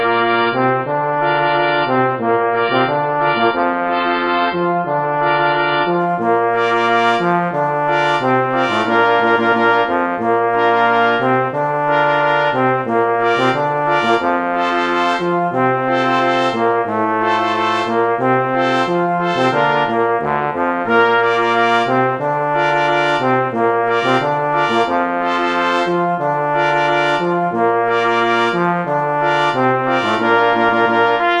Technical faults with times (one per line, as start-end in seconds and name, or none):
0.00-6.00 adaptive stream starting at a low bitrate